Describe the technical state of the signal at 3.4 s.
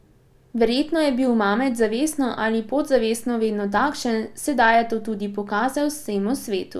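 At 3.4 s the signal is intact, with no dropout, distortion, clipping or other technical fault to be heard at that moment.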